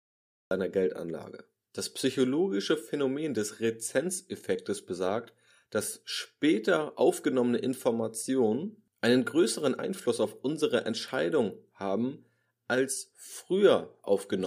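Speech with a cut-off start: dead digital silence until 0.51 s, then the audio drops in mid-sound with no natural attack, like the recording started late.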